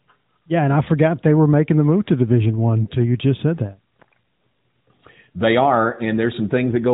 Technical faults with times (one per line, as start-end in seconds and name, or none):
2.84-2.87 lost AMR speech frames